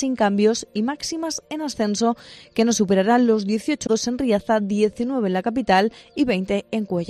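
At 3.83 to 3.90 s, damaged data in a compressed stream makes the decoder misread frames and lose sync. A short glitch results.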